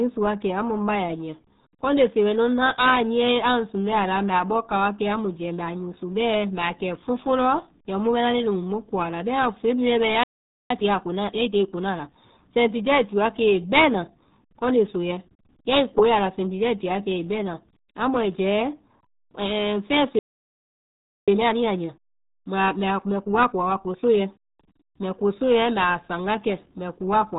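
Across the whole speech clip the RealAudio 14.4 codec leaves nothing above 4 kHz, and its heavy coding damage makes the speech muffled and gargly, as expected from a low-rate dial-up speech codec at around 8 kbit/s.

At 10.23 s a playback stall silences the output for about 0.47 s, likely because the player ran short of buffered data. From 10.71 s to 12.57 s, starting on "ai ti", time-compressed catch-up runs the speech at 1.25 times normal speed with unchanged pitch. The player is cutting and cross-fading small slices to clear its backlog, so the speech sounds hurried.

A second playback stall at 20.19 s cuts the sound for about 1.09 s. Catch-up follows from 21.28 s to 24.28 s at 1.15 times speed, again rushed at normal pitch.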